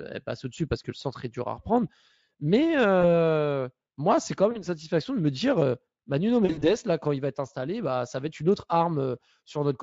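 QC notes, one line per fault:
3.01–3.13 s, 4.51–4.65 s and 6.45–6.75 s, VoIP packet loss concealed by the speech codec: 20, 40 and 120 ms of sound lost, the last in bursts over 160 ms with a 60 ms longest gap. The Speex decoder fills each gap by repeating its last pitch and filter at falling gain, so speech turns buzzy, then weak, and takes a moment to recover. On a spectrogram these show as smeared, evenly spaced harmonic lines that dim. On the waveform they appear as decaying, over-regular cycles.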